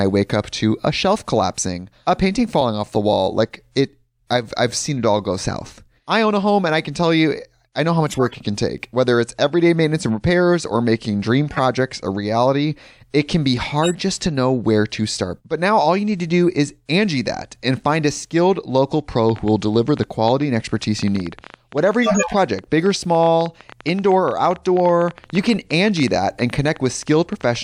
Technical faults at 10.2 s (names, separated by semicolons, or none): none